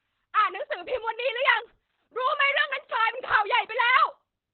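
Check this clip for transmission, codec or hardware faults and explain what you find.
There is one codec fault, Opus voice compression, present for the whole clip. The speech is held to a band below about 4 kHz and sounds muffled, hoarse and slightly robotic, consistent with SILK coding narrowband at roughly 8 kbps with coarsely quantised excitation.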